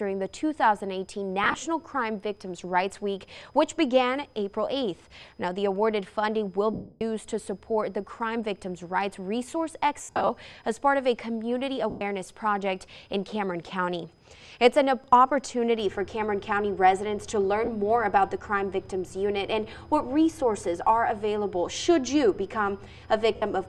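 Lost LE Audio frames break up the sound at 1.44 s (about 60 ms scattered, runs near 20 ms), 6.73 s (280 ms), 10.03 s (190 ms, scattered, longest run about 70 ms), 11.90 s (110 ms), 17.65 s (30 ms) and 23.36 s (60 ms). The LC3 decoder fills each gap by repeating the last spectrum with randomized signs, so tones become a noisy smear. The long 6.73 s gap fades toward silence rather than looping, which sets it apart from a buffer repeat or a plain dropout.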